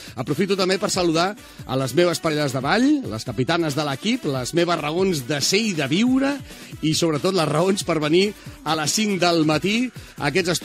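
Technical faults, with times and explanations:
2.27–2.31 s, 4.77 s and 8.73 s, compressed frames skipped: the audio jumps ahead about 70 ms, then about 20 ms twice, as whole frames are left out, so each join is a jump rather than a silent gap.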